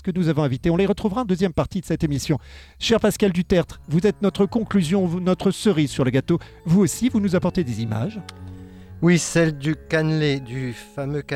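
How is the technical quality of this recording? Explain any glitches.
No glitches can be heard anywhere in this recording. Nothing in its technical quality calls for an explanation.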